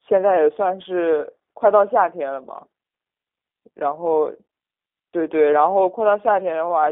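From start to end the speech carries plainly audible G.729 codec damage: a telephone band of 300 Hz to 3.6 kHz and a rough, synthetic texture from pulse-based resynthesis, which fits an 8 kbit/s coder. Plain band-limiting would only muffle the speech, while this sounds rebuilt.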